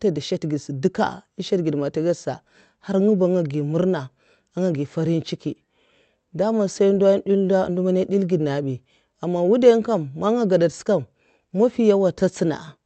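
No technical faults can be heard in the speech, which comes through a normal WebRTC call path whose Opus coding limits the audio band to about 8 kHz.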